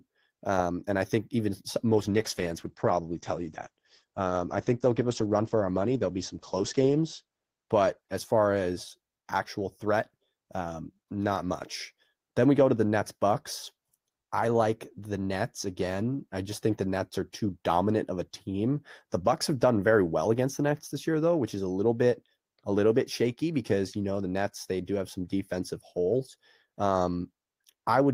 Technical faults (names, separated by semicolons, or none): call bitrate drop